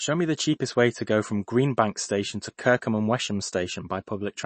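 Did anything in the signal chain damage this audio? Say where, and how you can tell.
Yes, at the codec stage, throughout. Nothing above 8.3 kHz, with a plainly audible watery swirl. That fits likely MP3 compression at a low bitrate near 32 kbps.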